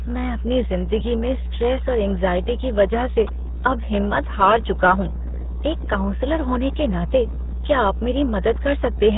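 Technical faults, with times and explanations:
Throughout, mains hum: the power line has leaked into the signal path, most likely through a ground loop or a transformer sitting close to the cabling. It adds a constant low tone at 60 Hz, along with a few low harmonics, that sits only a little below the speech in level, roughly 5 dB under it. The result is a heavy, buzzing drone that never lets up and fills the gaps between phrases.
Throughout, RealAudio 14.4 codec: the speech has passed through the old RealAudio 1 dial-up speech coder at a very low data rate, which fits an 8 kbit/s stream. The coder discards everything above 3.8 kHz and rebuilds the rest from a crude model of the voice, so the damage is heavy. Consonants lose their edges, and the voice turns muffled and gargly.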